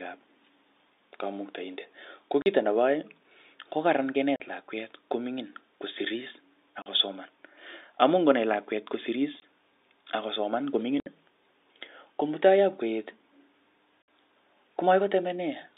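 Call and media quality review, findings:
Packet loss filled with silence at 2.42, 4.36, 6.82 (after "ko mingin kosiris"), 9.40 (after "ngonai lakwet kosirirs"), 11.00 and 14.03 s. Hard-edged gaps of 20 to 60 ms, mostly 40 ms. Gap lengths are whole multiples of 20 ms, which fits 20 ms packets dropped in runs of one to three. Receiver playing silence in place of lost packets, no concealment. G.711 narrowband line audible underneath, unrelated to the gaps.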